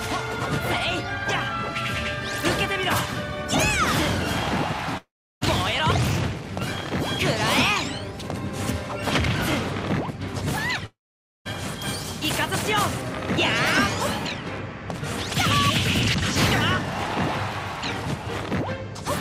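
At 4.97 to 5.43 s and again at 10.86 to 11.47 s the sound trails off into a fading buzz, then goes silent for about 340 ms and 510 ms, likely a long network dropout. Unlike a brief packet-loss glitch, it resumes with roughly 440 ms and 600 ms simply gone.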